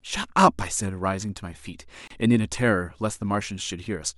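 At 2.08 s the speech drops out for about 28 ms, a brief hole whose edges are smeared by the codec, and it resumes at 2.10 s from exactly where it stopped. This is a gap at a join of encoded pieces: the audio was encoded in separate chunks, apparently about 10 s apart, and spliced without trimming, so the encoders' start-up silence and end-frame padding stayed in at the seam.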